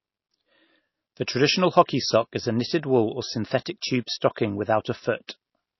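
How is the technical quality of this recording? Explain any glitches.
Quality's pretty rough, with obvious codec damage throughout and one small glitch near the end.

MP3 compression, likely, runs the whole way: nothing above 5.8 kHz, plus that watery, swirly texture you'd expect from a low bitrate around 24 kbps.

Pre-echo at 5.27 s: the codec smeared quantisation noise across its block, so a short hiss arrives about 18 ms before the attack, softening it.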